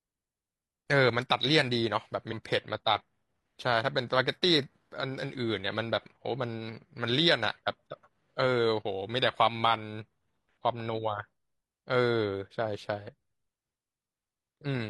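Around 2.28 to 2.33 s, the decoder drops a run of compressed frames, either because they are missing from the stream or because it rejected them as corrupt. Nothing is played for that stretch, so the speech lurches forward by about a fifth of a second, a whole number of frames, and the skipped sound is simply absent.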